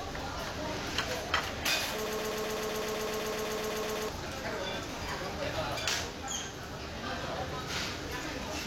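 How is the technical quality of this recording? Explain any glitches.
The recording has one clear glitch, a broken-record loop from 2.06 to 4.09 s. A 126 ms fragment repeats back to back about sixteen times, giving a rapid stutter, and the sound that belonged there is missing. The likely cause is a stalled player or stream re-sending its last buffered fragment.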